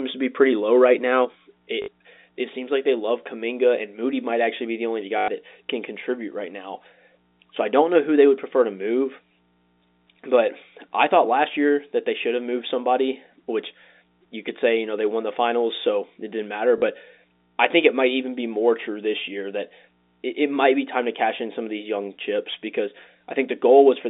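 Just after "to be", at 0.47 s, mains hum starts and runs to the end of the clip. Power-line interference from a ground loop or nearby transformer adds a steady 60 Hz tone roughly 25 dB below the speech, with weaker low harmonics. It is heard as a constant low drone under and between phrases. On a spectrogram it appears as a thin horizontal line at 60 Hz with fainter lines above it. In the waveform, quiet stretches show a regular low-frequency ripple instead of silence.

Packet loss with the last packet repeated occurs three times: 1.82 to 1.88 s (60 ms), 5.18 to 5.28 s (100 ms), and 16.78 to 16.82 s (40 ms). The receiver replayed the last good packet to fill each gap. The longest gap gives a short robotic buzz. The gap lengths fit 20 ms packets. A spectrogram shows frozen, repeating vertical slices. The waveform shows an identical segment copied end to end. All of this sits inside a telephone band of about 250 Hz to 3.7 kHz, so nothing is heard above that range.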